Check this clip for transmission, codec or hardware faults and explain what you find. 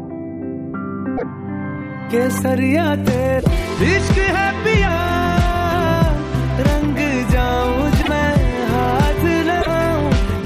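One fault recurs four times: a broken MP3 bit reservoir, likely. Short glitches occur at 1.16–1.23 s, 3.38–3.45 s, 8.01–8.08 s and 9.60–9.67 s. Each is about 70 ms, fitting a few 26 ms frames. The audio jumps ahead. Frames after each gap decode borrowed bytes wrongly, giving a brief chirp, noise burst or hole.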